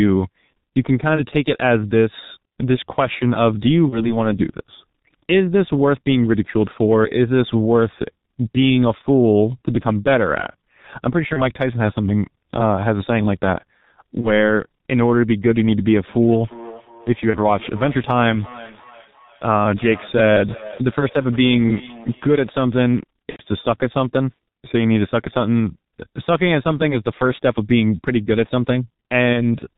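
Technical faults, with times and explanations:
Throughout: G.723.1 codec. The speech is squeezed to about 6.3 kbit/s in 30 ms frames, so nothing gets through above 4 kHz and the voice model updates slowly. That's why it sounds muffled and hoarse, with consonants smeared together and the damage heavy all the way through.
3.90 to 4.13 s, 11.33 to 11.42 s, 14.21 to 14.28 s, 17.30 to 17.38 s, 23.30 to 23.42 s: VoIP packet loss concealed by the speech codec. The first four are single lost 30 ms frames, and the last is three in a row, about 90 ms. Each time the decoder carries on from its last pitch and filter while fading the level, so you get a short buzzy or noisy smear. Because each frame builds on the previous one, the voice stays weak or distorted after the packets come back.
16.08 to 22.62 s: feedback echo between two devices. A second device in the room is replaying the call, and this microphone picks it up again. 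Its echo canceller can't remove what the other device plays, so the speech comes back roughly every 400 ms, thin and ringing, at most about 19 dB below the direct voice.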